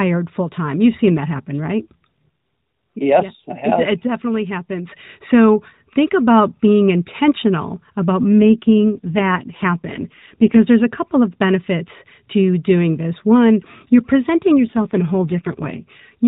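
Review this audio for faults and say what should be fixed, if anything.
AMR rate drop after "about being intentional about", 8.24 to 10.59 s, and after "you're presenting", 14.55 to 15.84 s. Speech turns buzzier and synthetic, suggesting 12.2 falling to 5.9 kbps. Keep the radio link strong to prevent it.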